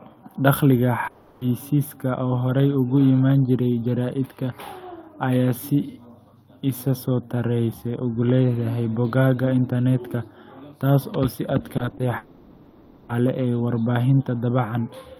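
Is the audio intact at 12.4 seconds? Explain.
No. From 12.17 to 13.11 s the speech breaks off and is replaced by about 0.92 s of concealment, a fading buzzy continuation of the last sound with no silence. This points to a long network dropout, likely with packets lost and the original audio never recovered.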